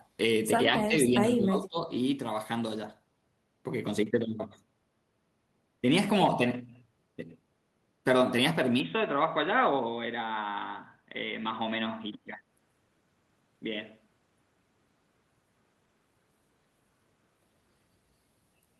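From 0.67 to 1.20 s and again from 1.37 to 1.96 s, the talker's level sinks. The first dip is about 10 dB, the second about 15 dB. This is likely speech suppressed in double talk, where the echo canceller turned down the talker along with the loudspeaker echo.

At 8.80 s the sound turns duller and narrower. The switch has no gap and no clear level jump. A faint new noise floor sits well below the speech. It is likely an input switched to a poorer device, lasting until 17.87 s.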